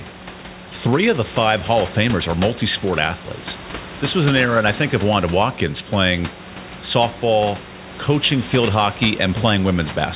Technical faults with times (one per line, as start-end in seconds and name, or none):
none